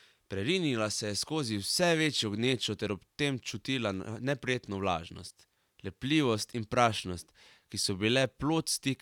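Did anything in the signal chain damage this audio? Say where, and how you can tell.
No, nothing along the chain seems to have touched this speech, and there's no point anywhere in it where the signal gives itself away as damaged.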